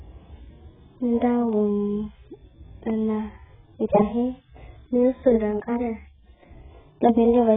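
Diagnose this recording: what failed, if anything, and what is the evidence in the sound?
AAC compression damage runs through the whole recording, at the codec stage. The speech has nothing above about 3.8 kHz, so it sounds dull and boxed-in, and sibilants and sustained vowels carry a heavy warbling, fizzy smear. The likely cause is an AAC-LC encoder starved of bits, consistent with a rate around 8 kbps. It lowers its cut-off, quantises the remaining spectral lines coarsely frame by frame, and leaves holes or patched noise where detail was.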